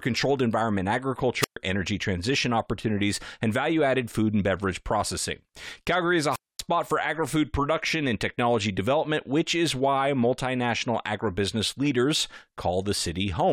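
The radio link of an analogue FM wireless microphone fades twice in this speech recording, and the receiver's squelch mutes it: a wireless microphone squelch dropout. Brief hiss swells into near-silent holes at 1.40–1.57 s (125 ms mute, before "energy transition opportunities and") and 6.31–6.60 s (236 ms, before "for agri food production").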